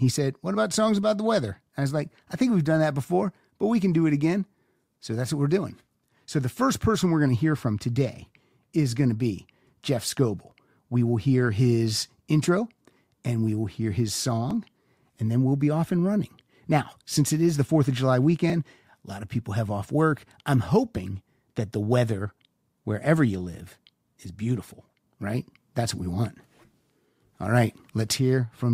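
At 10.51 and 14.51 s there's a tiny skip from overlap between stream segments: overlapping timestamps got trimmed, a sliver of sound dropped, and the 4-second spacing fits the segment length.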